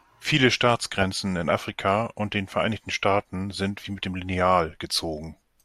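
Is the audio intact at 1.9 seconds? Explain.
Yes, at 1.9 s the speech runs cleanly, with no dropout, click, distortion or other fault to be heard at that moment.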